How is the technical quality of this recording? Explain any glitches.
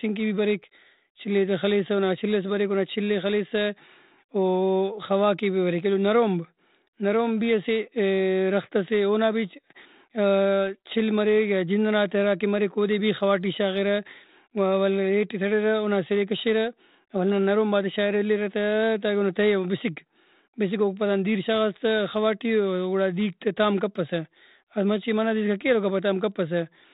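There are no glitches to explain; the speech runs without any technical fault. It has come through G.726 ADPCM at 32 kbit/s, the telephone-band coding that leaves nothing above 4 kHz and adds only a light trace of coding noise that rises and falls with the speech.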